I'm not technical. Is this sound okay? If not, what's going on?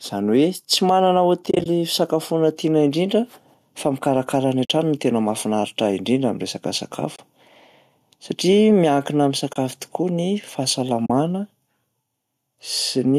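No, there are two problems. Throughout, you can hear gain pumping: loud and soft parts sit closer in level and the sound is squashed, likely from the level being set too high and a limiter clamping down. Separately, there's AAC frame loss with muting, brief soft-edged dropouts where the sound fades out and back in, at 1.46 s (a choppy patch lasting about 0.2 s), 4.65 s, 7.16 s, 9.53 s and 11.06 s.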